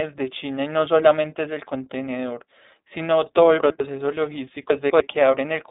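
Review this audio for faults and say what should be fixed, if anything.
The speech has been squeezed through the iLBC codec, a narrowband VoIP coder that codes each frame's excitation independently of the one before. The sound points to its 30 ms frame mode at roughly 13 kbps. The line band runs from about 200 Hz to 3.7 kHz, and nothing survives above 3.8 kHz, so the speech is muffled and telephone-like. The codec damage is plainly audible as a rough, synthetic quality. To prevent it, carry the audio with a wideband codec instead of iLBC.

Chunks out of order occur twice. In each case a 100 ms block of audio was delivered or written late and played after blocks that should have come after it. Nothing is missing, but the sequence is shuffled, and each displaced block leaves three hard joins. From 3.6 to 3.8 s, one chunk lands a single position late. From 4.7 to 5.0 s, a chunk lands two positions late. 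Both spots are heard as a garbled, jumbled moment. To prevent it, reorder incoming chunks by sequence number or timestamp in a jitter buffer before writing or playing them.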